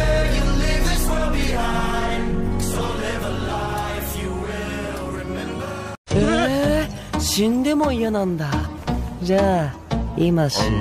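Nothing is technically wrong with this audio.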